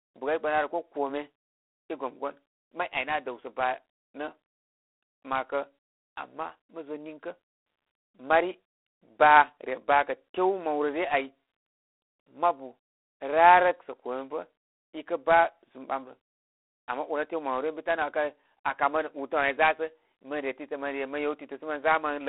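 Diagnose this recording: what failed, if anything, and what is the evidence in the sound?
The codec stage failed, throughout the clip. The speech carries a harsh, rasping hiss that rises and falls with its level. Nothing passes above 3.8 kHz, and the band sits at roughly 300 Hz to 3.4 kHz, typical of a telephone line. That points to G.726 ADPCM at about 24 kbit/s. Each sample is coded as a few bits of difference from an adaptive prediction. With so few bits, quantisation noise rides on the speech.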